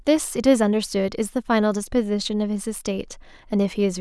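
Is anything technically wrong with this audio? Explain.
No, nothing technically wrong can be heard in this speech recording.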